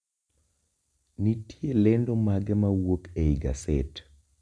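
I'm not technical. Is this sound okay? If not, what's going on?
Yes, this sound is okay. Nothing goes wrong with the audio at any point in this speech clip.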